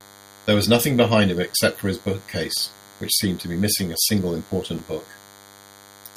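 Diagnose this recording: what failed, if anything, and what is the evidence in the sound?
A thin, steady buzz runs under the speech for the whole clip, pitched at 100 Hz and edged with a dense stack of harmonics, sitting roughly 25 dB below the speech. This is DECT cordless phone buzz, entering at the analogue wiring stage: a nearby DECT handset or base transmits a short radio burst every 10 ms, and the audio circuitry rectifies that energy, turning the 100 Hz burst rate into an audible pulse train with a harsh harmonic edge.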